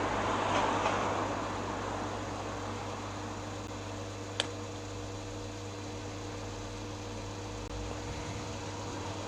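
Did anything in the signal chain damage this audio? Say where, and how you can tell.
Yes. There are gaps between stream segments, at the playback stage: a hard-edged hole of silence about 11 ms long at 3.67 s, and another of about 19 ms from 7.68 to 7.70 s. The sound stops and resumes abruptly with nothing missing, because the timestamps of adjacent segments fail to meet and the player pads the difference with silence. The two gaps sit about 4 s apart, which fits segment boundaries every 2 s.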